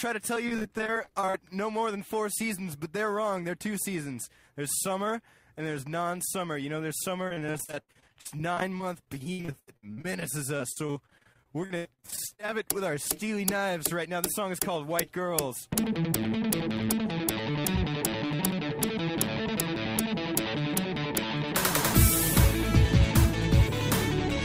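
Repeated packet loss hits the stream twice, from 0.35 to 1.35 s and again from 7.28 to 12.53 s. Packets keep going missing, and each hole is bridged by stretching the preceding sound, with gaps up to 39 ms in the first burst and 80 ms in the second. About 27% of the first stretch and 30% of the second is patched-over audio, so the sound turns choppy, with pieces audibly dropped throughout.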